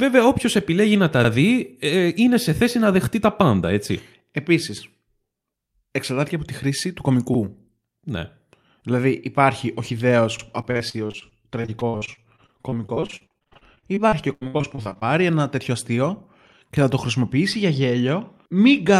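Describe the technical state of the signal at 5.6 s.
Around 5.6 s, the speech plays through cleanly, with no dropout, distortion, clicks or other technical disturbance at that point.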